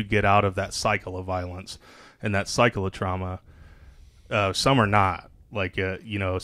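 No technical faults can be heard anywhere in this recording.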